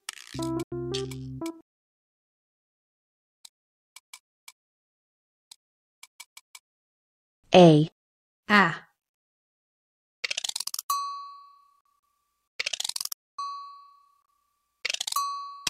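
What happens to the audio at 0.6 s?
From 0.63 to 0.72 s the sound cuts to abrupt silence, then resumes further along, as if it had played on: a Bluetooth dropout, likely late wireless packets being discarded.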